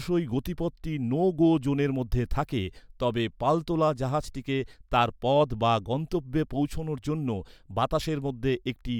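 Nothing in the recording stood out as a technical problem on listening.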